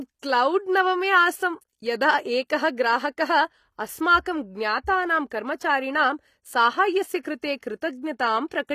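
HE-AAC compression runs through the whole of this speech clip and is plainly audible. The treble sounds synthetic, and nothing sits above 14.9 kHz. S sounds come out gritty and metallic because the upper band is not the original signal. It has been rebuilt from copies of the lower spectrum under a coarse envelope, so its harmonics fail to line up with those below the crossover. That coding is likely the cause, and the strength of the damage points to a low bitrate of around 24 kbps. Pre-echo appears from 7.22 to 7.25 s as a hiss about 26 ms long just ahead of a sharp attack, which lands softened and smeared. The codec has spread quantisation noise sized for the loud onset across its whole transform block, so the noise leaks into the quiet stretch before the attack, where nothing masks it.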